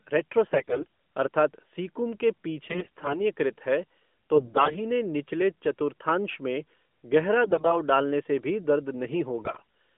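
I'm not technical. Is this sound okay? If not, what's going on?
No. The speech comes through a phone-style mobile line, and in five short spots it turns hoarse, scratchy and gargly. These are AMR bit errors. Parts of the phone's digital signal arrived garbled, but not badly enough to be thrown away, so the phone rebuilt the voice from wrong details. Pitch and loudness stay roughly the same, and the texture breaks up. It happens at 0.48 to 0.86 s, at 2.66 to 3.26 s just after "सीकुम के", at 4.36 to 4.78 s just before "निचले चतुर्थांश में गहरा", at 7.45 to 7.78 s between "निचले चतुर्थांश में गहरा" and "डालने से भी दर्द", and at 9.40 to 9.63 s.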